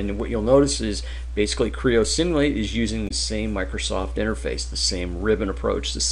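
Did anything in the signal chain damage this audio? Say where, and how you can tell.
Yes: damaged data in a compressed stream at the codec stage. Corrupted frames broke decoder sync around 3.07 to 3.11 s, producing a brief glitch.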